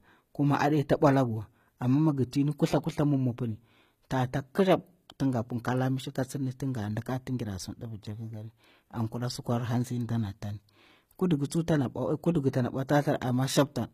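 From start to finish the speech carries plainly audible HE-AAC compression damage. The treble sounds present but not genuine. Sibilants come out gritty and metallic, with a lisping edge. Nothing is heard above 14.9 kHz. The likely cause is HE-AAC coding at a low bitrate, around 20 kbps. That codec stores only the lower spectrum and rebuilds the highs by copying lower bands upward. The copied harmonics fail to line up.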